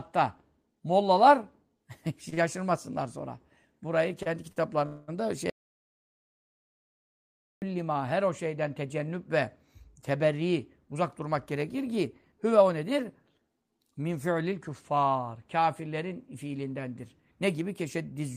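Short stalls from late packets occur at 2.29, 2.34, 4.23 and 4.52 s. Each time a packet missed its slot, the jitter buffer ran dry and the receiver stretched the last sound for 24 to 42 ms, leaving a held, faintly buzzy moment with nothing lost.

At 4.86 s a call audio freeze holds the sound for about 0.24 s, to 5.10 s. It is likely caused by packets held up in transit emptying the buffer. The last sound is extended as a fading buzz, and playback resumes where it stopped.

From 5.50 to 7.62 s there is an audio dropout to silence. The sound cuts off abruptly into silence with no room tone for about 2.1 s, and then cuts back in mid-flow. The likely cause is a lost input with silence written in its place. The content of that span is gone.

Between 10.34 and 13.39 s a jitter buffer speed-up runs the audio at 107% of normal pace without changing pitch. To shed excess delay, the receiver trimmed out about a fifth of a second in short pitch-period pieces, which makes the speech sound hurried.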